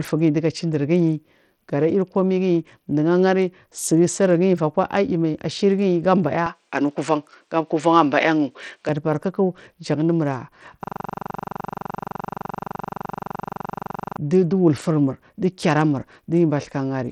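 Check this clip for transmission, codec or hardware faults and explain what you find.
Three faults are audible in this speech clip.

Throughout, the sound has the gritty, coarsely quantised texture and unstable treble of Bluetooth SBC compression. The bit pool appears starved, which fits a rate around 80 kbps. The weak upper sub-bands get few bits, so the top end flickers and aliasing grit sits on the voice. A Bluetooth link is the likely cause.

From 6.46 to 8.89 s, the input seems switched to a poorer device. Nothing passes above about 10.5 kHz, so the sound turns duller. The change is seamless, with no gap and no level jump. A faint new noise floor appears, far below the signal. A change of input device is likely.

From 10.84 to 14.17 s, a system hang loop takes over. One 42.67 ms slice repeats 78 times, a buffer that fits 2048 samples. The driver stalled while the hardware kept replaying the ring buffer. 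It sounds like a buzzy stutter at 23.4 Hz.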